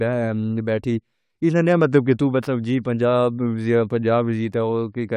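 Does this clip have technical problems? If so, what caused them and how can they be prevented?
No, no technical faults are audible.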